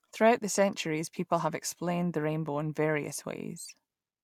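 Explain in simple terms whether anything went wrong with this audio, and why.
Nothing went wrong with this recording; no faults can be heard at any point in it.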